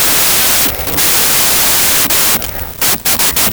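From the first instant to the end, the speech sits under a thick wash of loud, harsh noise. That's a wrong sample width problem, and the sound fits packed 24-bit data being read as 32-bit. Each 32-bit value straddles bytes from neighbouring samples, so only some values carry the true top bits, and the rest come out as garbage. The buried speech plays back about 1.33 times too fast, pitched up to match.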